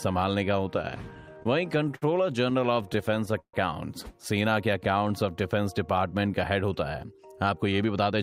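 From 1.33 to 2.04 s, and again from 2.50 to 3.55 s, there are repeated stalls (stutter). Packets arrived late, so the jitter buffer kept running dry. The receiver stretched the last sound across six gaps, then ten, the longest being 60 ms and 140 ms. Nothing is lost, but the sound drags and stutters.

From 4.50 to 5.09 s comes a jitter buffer slow-down. The receiver repeated short periods to rebuild its reserve, adding 53 ms. The sound plays at 92% speed, with unchanged pitch and drawn-out sounds.

From 7.04 to 8.12 s there is a jitter buffer speed-up. The receiver trimmed about 150 ms of short pieces to cut delay, so the sound runs at 112% speed and feels hurried.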